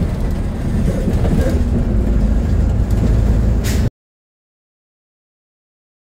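At 3.88 s the input feeding the recorder most likely dropped out, through a disconnected device, a failed link or an accidental mute, while recording carried on and wrote nothing but silence. That is an audio dropout to silence: the sound stops abruptly mid-flow and gives way to silence, with no room tone or noise floor underneath, for the remaining 2.23 s until the end. Whatever happened during that stretch is lost.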